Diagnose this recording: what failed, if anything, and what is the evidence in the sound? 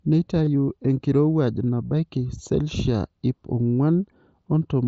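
Concealed Bluetooth headset packet loss on the wireless link: brief buzzy holds at 0.45–0.47 s and 1.86–1.91 s before "selshia iip", where the receiver repeated recent waveform.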